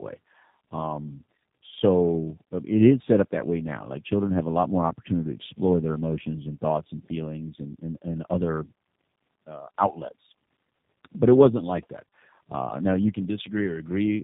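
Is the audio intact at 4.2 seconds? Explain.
No. At 4.2 s, as throughout the clip, tandem speech coding is audible: two low-rate speech coders in a row, which fits AMR-NB followed by G.729A, each re-encoding the other's damage. Speech sounds rough, muffled and warbly. A spectrogram shows nothing above 3.7 kHz and smeared harmonics.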